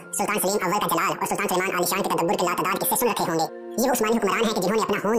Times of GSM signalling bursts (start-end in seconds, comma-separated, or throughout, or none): none